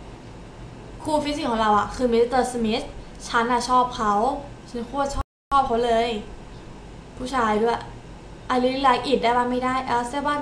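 Halfway through, the sound cuts out mid-flow and the output goes silent from 5.21 s to 5.52 s, a gap of about 0.3 s before the audio picks up again. This is a playback stall: the silence most likely came from the player either running out of buffered data or having its playback thread blocked, so nothing reached the output until it recovered, roughly 302 ms later, and resumed delivering the audio.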